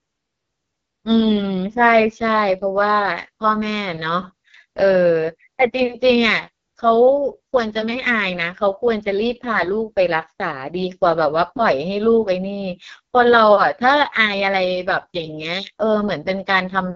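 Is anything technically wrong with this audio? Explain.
Yes. Throughout, the speech carries heavy AMR wideband (HD Voice) codec damage: sparse pulse-driven modelling, consistent with the lowest 6.6 kbit/s mode, makes it rough and raspy, with nothing above 7.4 kHz.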